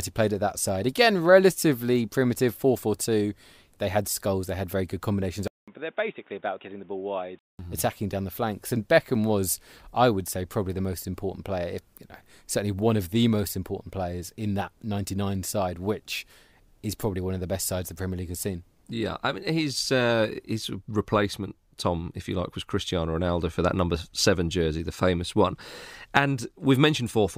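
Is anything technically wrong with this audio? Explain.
Yes. From 5.48 to 7.59 s, after "had very good combinations", the input likely switched to a poorer device. A 0.2 s gap comes first. The narrower-band device then cuts everything above 3.7 kHz, so the speech turns boxy, drops a few decibels and gains a faint new noise floor until "attacking down the flanks".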